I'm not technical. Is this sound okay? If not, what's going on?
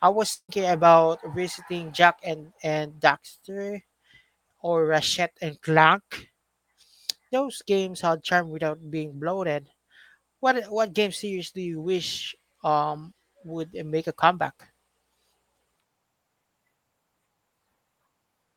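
No. Right at the start, between about 0.33 and 0.51 seconds, there is a long network dropout: the connection likely stopped delivering audio for a moment. For roughly 0.15 seconds the receiving end covers the gap by stretching the last bit of sound into a fading buzz or hiss, then there is about 0.08 seconds of silence. When the speech resumes, about 0.16 seconds of it is simply missing.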